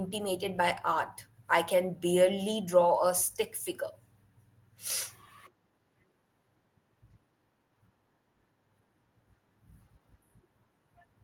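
No technical faults can be heard anywhere in the speech recording. There is nothing to place in time or trace to a cause.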